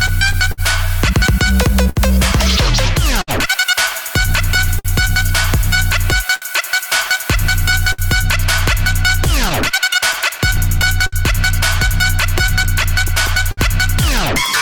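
Clock drift between sender and receiver runs through the whole clip. The sending side's clock runs about 4 percent slow, so audio arrives a little more slowly than it is played. The jitter buffer keeps draining, and the receiver compensates by repeating short pieces. The result is small, recurring timing hiccups at uneven intervals, a stutter or stretch that never settles.

Scattered short gaps appear from 0.07 s to 13.6 s. Around thirty small holes, where packets were lost or arrived late, are spread across this stretch. Each one is patched by continuing the last sound, adding up to roughly 0.7 s of filled audio, about 5 percent of the span. Most patches are very brief, and the longest is around 70 ms. They are heard as fleeting ticks, smears or hiccups in otherwise clear sound.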